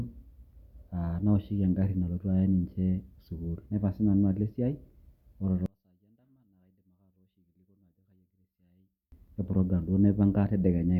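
Speech that nearly vanishes from 5.66 to 9.12 s, dropping by about 38 dB to a faint residue before returning. The likely cause is one channel inverted: with reversed polarity on one side, the centred speech common to both channels cancels when summed to mono.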